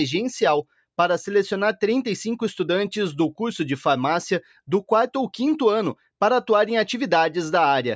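From 4.42 to 4.59 s, sound cut by the noise suppressor: mistaken for noise, the sound dips by about 7 dB for around 150 ms. This shows as a brief waveform sag and a fainter spectrogram band, within the call microphone processing's 8 kHz ceiling.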